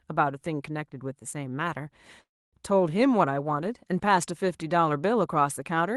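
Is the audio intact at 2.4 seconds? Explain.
No. From 2.23 s to 2.55 s the audio stalls in a call audio freeze. The sound just before the stall is briefly carried on as a fading buzz or hiss and then drops to silence for about 280 ms. The likely cause is delayed packets draining the jitter buffer, so the receiver filled the wait with roughly 290 ms of concealment. When playback resumes it picks up where it stopped, with nothing lost, but everything after now runs about 290 ms late.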